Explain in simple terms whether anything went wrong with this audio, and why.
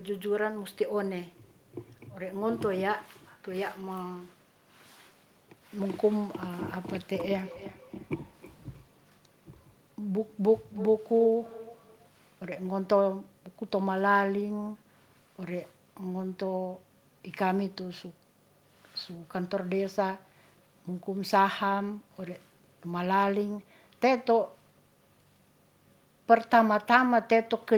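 From about 7.4 to 12.1 seconds there's feedback echo between two devices: another device in the room plays the speech back into the microphone, so each bit returns roughly every third of a second, thinner and ringier, because the echo canceller only removes its own playback.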